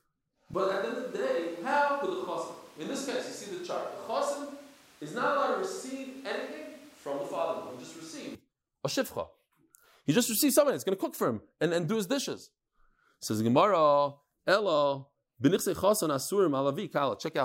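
From 0.54 to 8.35 s, starting at "a shifcha", the speech turns abruptly roomy, hollow and thin, about 5 dB quieter, with noise closer behind it: likely a switch to a distant microphone.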